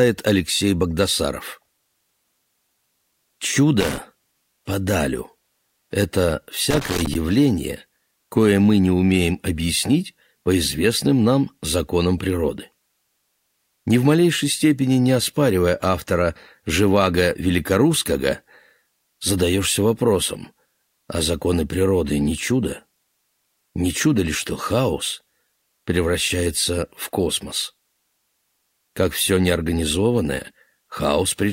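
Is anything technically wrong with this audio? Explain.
Yes. There is loose connector crackle at 3.80 to 3.98 s and again at 6.71 to 7.15 s. A worn or dirty contact is intermittently opening and closing, chopping the signal, so the audio breaks into irregular bursts of scratchy crackle.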